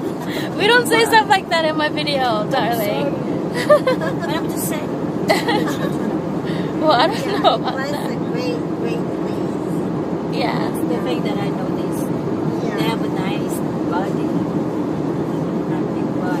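Nothing goes wrong anywhere in this audio; there's no technical fault to report at any point.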